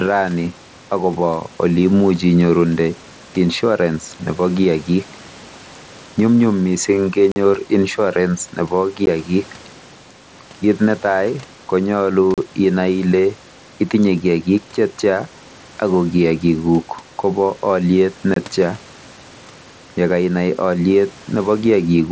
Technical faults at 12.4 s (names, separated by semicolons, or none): unconcealed Bluetooth headset packet loss